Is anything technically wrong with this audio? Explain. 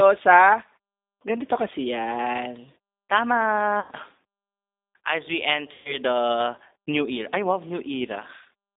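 Yes. The G.729 codec is plainly audible throughout. This 8 kbit/s coder rebuilds speech from a filter, a pitch predictor and a few pulses per frame, so the result sounds rough and slightly synthetic, confined to roughly 250 Hz to 3.7 kHz. On a spectrogram there is a flat, empty band above 3.7 kHz.

VoIP packet loss concealed by the speech codec occurs at 3.80–3.91 s and again at 5.73–5.98 s. The gaps of 90 ms and 120 ms are consistent with three and four 30 ms packets. The decoder extends its last pitch and filter with falling gain, so a buzzy tone or coloured noise that fades replaces the speech. A spectrogram shows frozen, smeared harmonics, and the waveform shows a tapering envelope.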